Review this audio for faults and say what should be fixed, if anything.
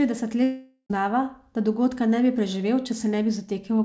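From 0.44 to 0.92 s the speech decays into a fading buzz, then near silence, and resumes with about 0.46 s missing. This is likely a long network dropout rather than brief packet loss, because content is skipped, not just concealed. Prevent it with a more stable network link, forward error correction, or redundant transmission on the call path.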